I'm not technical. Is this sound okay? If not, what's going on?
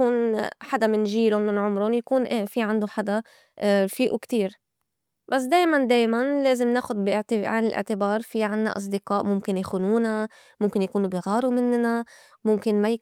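Yes, nothing wrong turns up anywhere in this recording, so there is nothing to fix.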